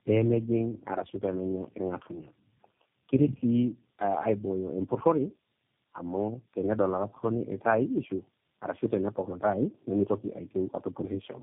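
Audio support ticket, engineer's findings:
Tandem speech coding, whole clip. Speech rough, muffled, warbly. Nothing above 3.6 kHz. Sound fits three low-rate speech codecs in a row, likely AMR-NB twice then G.729A, joined by G.711 A-law links. Each border decodes and re-encodes. Each coder models the previous coder's errors as speech, so the damage compounds.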